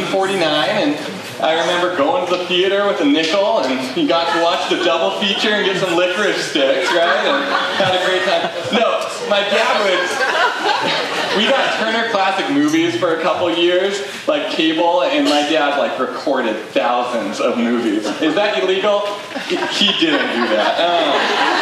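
Listening through the clip, nothing stood out as a technical fault at any point.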